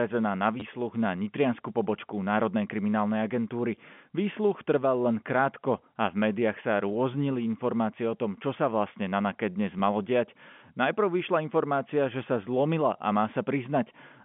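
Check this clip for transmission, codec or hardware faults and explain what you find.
There is one kind of fault: brief packet loss with the last packet repeated, at three points.

It occurs at 0.60 to 0.62 s, at 6.89 s and at 9.79 s. Missing audio was filled by replaying the previous packet. The gaps, 20 ms then 10 ms, suggest 10 ms packets. A single replay sounds like a small blip, and a run like a short stutter. The telephone band, about 150 Hz to 3.4 kHz, comes from G.711 A-law coding, which is working as expected.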